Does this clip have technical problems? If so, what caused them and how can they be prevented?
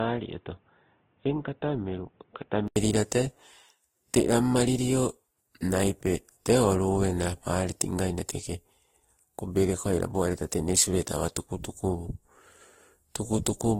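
Yes. From 0.0 to 2.76 s the speech sounds muffled and boxy, with nothing above 3.6 kHz, somewhat quieter than the rest of the clip, and with a faint hiss of its own. At 2.76 s an 80 ms silence falls, and then the full, clearer sound takes over. This is likely an input switched to a poorer device: the recording began on a narrow-band microphone or a headset's call profile before the system changed to the better input. Prevention: select and lock the intended microphone before recording starts, and disable automatic device or profile switching.

Throughout the clip the speech has a smeared, watery texture, with two different kinds of coding artefact heard at once and nothing above 16.7 kHz. The likely cause is transcoding between lossy codecs. The texture fits an Opus encode at a very low bitrate, around 16 kbit/s, later re-encoded to Vorbis at roughly 47 kbit/s. The second encoder spent its bits on the first encoder's damage and added artefacts of its own. 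Prevention: keep a lossless master and encode to the final format only once.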